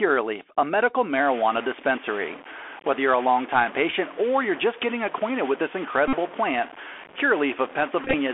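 The whole clip has passed through a Bluetooth CVSD headset codec. The band is held between about 300 Hz and 3.4 kHz, so the sound is thin and boxy. The damage is plainly audible. The codec tracks the waveform one bit at a time, which fits a 64 kbps CVSD link. Its step size adapts too slowly for fast, loud changes. Sharp consonants turn scratchy, and a grainy hiss sits under the speech.

From 1.13 s, just after "a medical", a distortion joins in and lasts to the end. The hiss in the gaps grows louder too. This is likely a stuck bit: one bit of each sample stays fixed at 0 or 1. Roughly half the sample values land wrong by that bit's weight. The error follows the waveform, so it moves with the speech. It also fills the quiet parts with noise.

At 6.08 to 6.16 s comes a Bluetooth headset packet repeated event. About 49 ms of audio is lost. The chip keeps decoding the last good packet's bits over again. 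Each packet is 3.75 ms long, so the repeats give a steady buzz near 267 Hz. It stops when good packets come back.

At 8.02 to 8.15 s the packet repeats return, scattered this time. About 71 ms is lost over a span of 116 ms. The longest unbroken run is about 15 ms. So the 267 Hz buzz comes in short bursts, broken by brief stretches of real audio.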